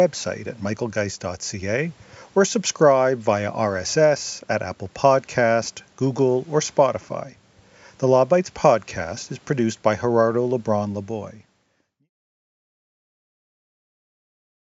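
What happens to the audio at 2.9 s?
At 2.9 s the speech carries on intact, with no dropout, click or distortion to be heard.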